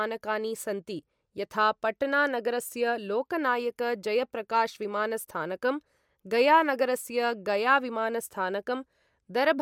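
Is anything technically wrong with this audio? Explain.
No, nothing technically wrong can be heard in this speech recording. It needs no technical repair.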